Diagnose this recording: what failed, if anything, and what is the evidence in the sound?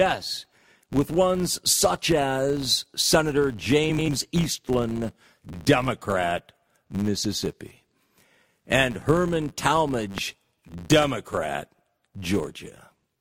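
Filter restarted on every block, throughout the speech: a steady 100 Hz buzz rides under the sound and rises and falls with its level. This points to the driver or buffer stage, where a filter resets to silence at each block and leaves a small transient every time.

Frames out of order, from 3.89 to 4.09 s: a brief garbled flutter, and no time lost. This is a network or codec fault. Two neighbouring runs of four frames each, with blocks of about 93 ms, swapped places before decoding.

Loud pops, at 10.18 to 10.21 s (about 15 dB above the signal) and 11.02 to 11.06 s (about 10 dB): single sharp pops laid over the speech, which carries on underneath. These come from the analogue wiring stage, most likely a voltage step from a plug, switch or static discharge.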